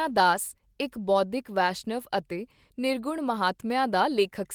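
No faults detected; the Opus voice coding runs in hybrid mode at about 20 kbps with a fullband response reaching roughly 20 kHz and only light coding texture.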